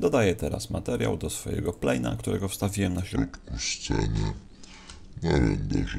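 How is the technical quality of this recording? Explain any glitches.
The recording has one clear glitch, a section at the wrong speed. From 3.16 s to the end at 5.98 s, the playback clock likely runs slow, at 0.621 times the original rate. Timing and pitch drop together, so the audio turns sluggish and about seven semitones deeper.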